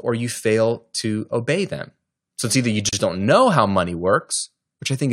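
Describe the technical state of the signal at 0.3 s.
At 0.3 s the speech signal is intact, with no audible fault at that moment.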